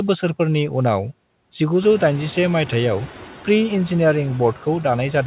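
Noise suppressor artifacts run through the whole speech clip. The suppressor estimates the steady background and pulls those bands down by about 9 dB, frame by frame. The room noise rises by about 17 dB at roughly 2 s, while still sitting about 18 dB below the speech, and throughout the noise sinks between words and rises under them. Unlike the coding noise of the telephone codec, which follows the signal level and is band-limited at 4 kHz, these artifacts shift with every frame of speech.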